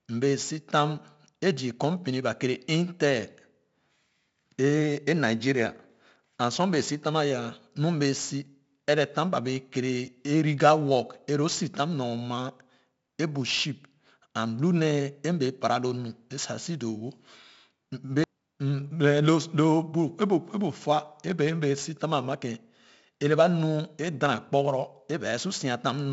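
From start to finish the speech carries 4-bit ADPCM compression, and it's heavy. Each sample is coded as a coarse step from a predicted value, so the error rides along with the level. You hear a gritty hiss on every loud syllable and roughness on sharp onsets where the step size lags behind. Nothing comes through above about 7.7 kHz, which fits a 16 kHz sample rate at 64 kbps, so the top end sounds dull.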